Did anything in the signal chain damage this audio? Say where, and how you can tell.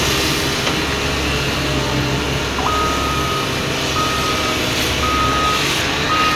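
No, no stage of the signal chain has left any audible damage on this recording of everyday sounds. From capture through to playback, nothing in what can be heard points to a fault at any point in the chain.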